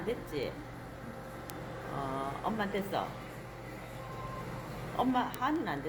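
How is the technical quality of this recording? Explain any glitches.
The recording is marred by a steady train of clicks running almost its whole length.

Word clock ticks run from 0.22 s to 5.77 s, about every fifth of a second, so around thirty in all. The receiving device is reading a digital link on its own clock rather than locking to the sender's. The two clocks drift apart by something on the order of 100 ppm, and at each slip one sample is dropped or doubled. That discontinuity is heard as a sharp, regular tick over the sound.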